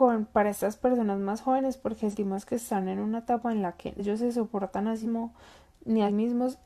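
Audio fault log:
2.09 to 6.10 s, compressed frames skipped: at 2.09, 3.95, 5.02 and 6.04 s the speech jumps ahead, dropping roughly 0.1 to 0.3 s in steps that fit 46.4 ms frames.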